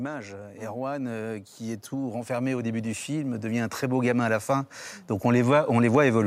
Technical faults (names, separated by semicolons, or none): automatic gain rising